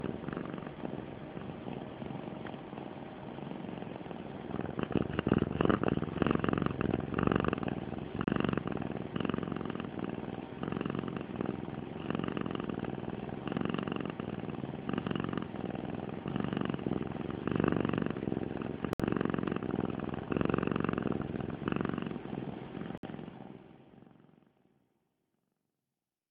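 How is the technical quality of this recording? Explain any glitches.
Three short dropouts in this one, all the same kind: a Bluetooth stall, likely. At 8.24 to 8.27 s (28 ms), 18.93 to 19.00 s (64 ms) and 22.98 to 23.03 s (57 ms) the sound cuts to silence, then resumes. Radio interference held up packets, the headphones' buffer ran dry, and playback paused until the resent packets caught up. The fade-out at the end is smooth and deliberate, not part of that.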